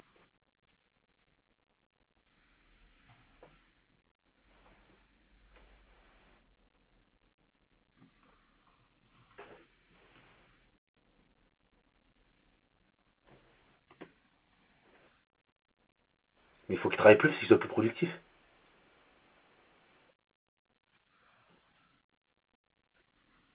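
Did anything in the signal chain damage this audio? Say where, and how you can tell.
No, nothing in the chain damaged this speech. What you hear is the normal sound of mu-law G.711 telephone coding at 8 kHz: a narrow telephone bandwidth with a faint hiss that rises and falls with the speech level.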